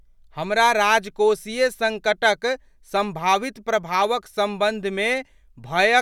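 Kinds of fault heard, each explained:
Nothing here stands out as a fault; the speech comes across without any dropouts, clicks, distortion or other glitches worth pointing to.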